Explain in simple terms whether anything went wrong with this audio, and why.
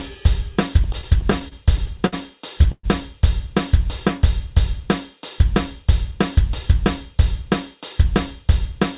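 Repeated stalls (stutter), 0.84 to 2.14 s: packets kept arriving late, so the sound paused twelve times, up to 61 ms each, while the receiver stretched the last bit. It drags, but nothing is lost.

Call audio freeze, 2.72 to 2.85 s: the sound holds and fades into a short silence, likely because packets were held up. Playback then resumes where it stopped.

Jitter buffer speed-up, 5.44 to 8.80 s: after falling behind, the receiver snipped out tiny slices, about a tenth of a second in all, so the sound runs 2% faster at the same pitch.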